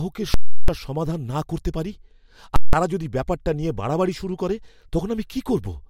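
At 0.34 to 0.68 s, before "সমাধান না করতে পারি", and at 2.56 to 2.73 s, before "তারা যদি ব্যাপারটা নিয়ে", invalid numbers at full scale pin the output to its extreme. Each gives a hard pop on entry and exit with silence between, unlike clipping, which keeps the speech audible. The lengths fit 16384- and 8192-sample blocks.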